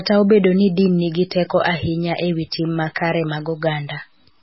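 From the first moment to the end, the speech carries grainy distortion that rises and falls with the sound. This is low bit depth without dither: the samples were likely truncated to very few steps, which fits about 9 bits, so the rounding error follows the signal instead of forming a steady hiss. Quiet stretches turn gritty, with the error sitting around 40 dB below the signal. On a waveform, low-level passages look stair-stepped, and a spectrogram shows broadband grit that appears only where sound is present.

MP3 compression also runs through the whole clip, and the damage is heavy. The encoder likely ran short of bits, which points to a rate near 16 kbps. It discarded everything above 5.6 kHz, so the sound is dull and muffled, and it dropped weak frequency lines that flicker on and off, giving a watery, swirly quality with metallic chirps on s sounds and smeared attacks. A spectrogram shows a hard ceiling at 5.6 kHz, with patchy, blocky holes below it that change from frame to frame.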